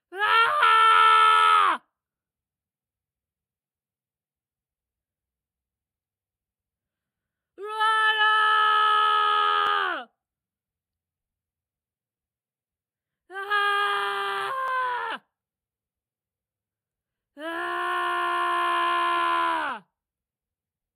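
The sound has a thin, slightly hollow top end throughout, with a fixed notch around 7 kHz. This is channel delay (comb filtering): one channel trails the other by a few samples, far under a millisecond, so summing to mono cancels the shared content at evenly spaced frequencies. Brief clicks or stutters occur at 9.67, 14.68, 17.19 and 19.69 s, from overlapping chunks: the audio was handled in 2.5 s chunks that each began early, replaying 6.5 ms at the join.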